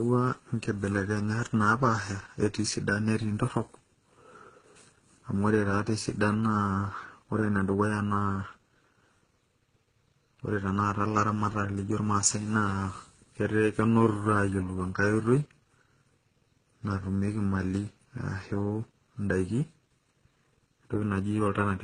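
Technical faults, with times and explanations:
throughout, channel delay (comb filtering): one channel lags by under a millisecond before mono summing, carving evenly spaced notches from around 700 Hz, so speech sounds hollow and phasey.
throughout, transcoding between lossy codecs: the audio was likely encoded by several lossy codecs in turn; nothing remains above 14.5 kHz, and differing compression artefacts are heard layered together.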